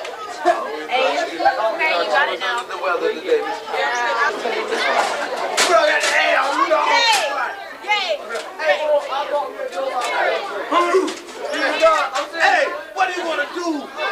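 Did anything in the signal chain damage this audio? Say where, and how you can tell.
No, nothing along the way seems to have hurt it, since there's no sign of damage from any stage of the chain anywhere in it.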